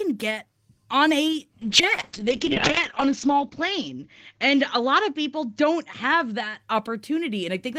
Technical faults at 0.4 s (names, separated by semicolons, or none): none